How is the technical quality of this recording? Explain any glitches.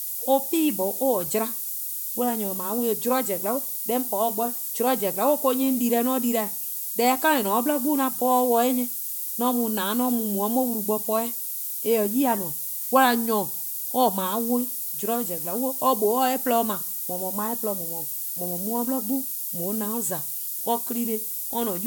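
The technical quality is poor, because one fault runs through the whole recording.

Low bit depth with noise shaping is present from start to finish. The speech is held at only 5 bits, and the rounding error is fed back so that it is pushed up toward high frequencies. The result is a steady, thin hiss that climbs strongly toward the top of the band, at roughly the same level as the speech itself. On a spectrogram this shows as a constant wash of energy that brightens toward the top edge, even in pauses. On the waveform the quiet stretches are filled with dense noise instead of settling toward silence.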